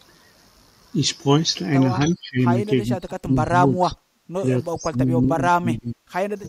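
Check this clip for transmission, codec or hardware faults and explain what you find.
There is one recurring fault in this speech. Speech suppressed in double talk appears at 2.15 to 2.44 s, 2.95 to 4.46 s and 4.69 to 6.28 s. The level falls away in patches, by about 20 dB in the first stretch and by up to about 35 dB in the later two, each of which loses roughly a second of speech. The likely cause is an echo canceller that couldn't tell this talker from returning loudspeaker echo while both sides spoke, so it attenuated everything.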